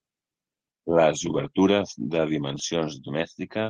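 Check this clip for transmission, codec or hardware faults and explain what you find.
Two short stretches of lost packets rebuilt from error correction. The first runs from 1.25 to 1.47 s, the second from 2.47 to 2.57 s. The rebuilt spans last about 120 ms and 60 ms, which fits runs of 20 ms packets. Each lost packet was replaced by a low-bitrate copy carried in the next one. So the speech never drops out. It turns rougher and noisier for a moment, then returns to the clip's Opus call sound, which stops near 12 kHz.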